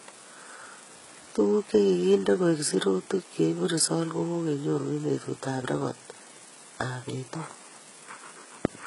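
HE-AAC compression, throughout the clip: the speech has heavily damaged treble and nothing above 11.1 kHz. The top of the spectrum sounds synthesised rather than captured, with s sounds coming out gritty and lispy, and a metallic edge where the upper harmonics fail to line up with the body of the voice. The likely cause is spectral band replication at a very low bitrate, in the region of 12 kbps.

Repeated buffer, at 3.25 s, between "nde koek sirutik" and "chebu results kokenyoru": a tiny slice of audio is played five times in a row, each repeat butting hard against the next. Each slice lasts about 1.3 ms, which fits a 64-sample buffer. At that size the repeats merge into a brief buzzy click rather than a stutter, and a few milliseconds of real audio are lost beneath it.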